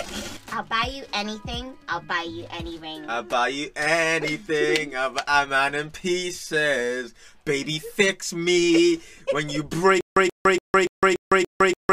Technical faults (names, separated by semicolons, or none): stutter with silent gaps